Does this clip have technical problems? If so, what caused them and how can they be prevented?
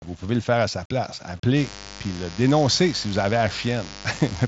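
Yes. Mains buzz enters at 1.53 s, just after "faire à sa place", and runs to the end. A dimmer, rectifier or unshielded cable is letting sharp switching spikes into the signal twice per 50 Hz cycle, so the interference is a dense stack of harmonics rather than a pure hum. It sounds like a steady, raspy buzz sitting roughly 15 dB below the speech. To prevent it, keep the recording chain away from dimmers and chargers and use properly shielded, grounded cabling.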